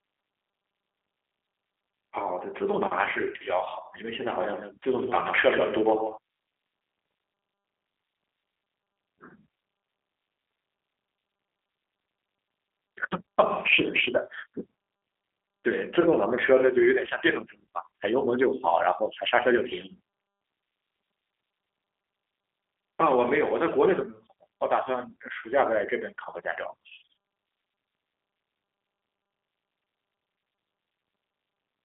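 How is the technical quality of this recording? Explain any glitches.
The recording is narrowband and coded throughout, with one short stretch where the speech is doubled.

G.729 codec, whole clip: the speech is rebuilt from a vocal tract filter, a pitch predictor and a few pulses per frame, which fits an 8 kbit/s VoIP link. It sounds rough and synthetic. On a spectrogram, energy stops sharply near 3.6 kHz.

Doubled audio track, 4.14 to 6.18 s: a second, clean copy of the speech trails the first by around 150 ms at roughly 10 dB lower, starting and stopping abruptly. This is likely a second capture path or an edit holding two misaligned copies. The waveform shows smaller repeated onsets, and the spectrogram shows each syllable ghosted slightly later.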